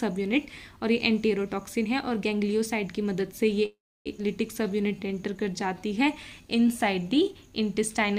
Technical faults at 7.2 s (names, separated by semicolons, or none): jitter buffer slow-down